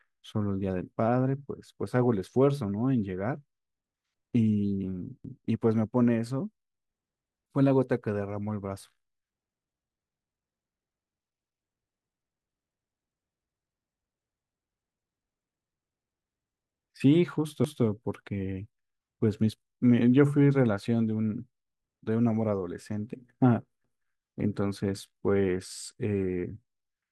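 Overlapping chunks appear at 5.25 to 5.45 s, 17.65 to 17.85 s and 23.85 to 24.05 s. The speech was handled in 6-second chunks, and each new chunk began 200 ms before the previous one had finished. That 200 ms stretch is therefore played twice at each join, so the speech briefly stutters back on itself.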